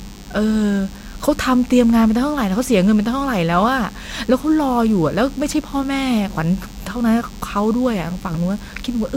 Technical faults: DECT cordless phone buzz

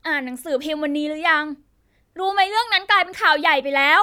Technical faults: none

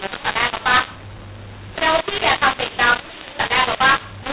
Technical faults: mu-law and A-law mixed up

